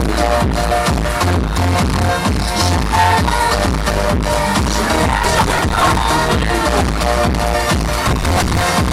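Processor overload crackle hits at 5.24 to 6.02 s and again at 8.08 to 8.61 s: missed deadlines on buffers of around 10 ms leave dozens of tiny skipped gaps, heard as gritty tearing.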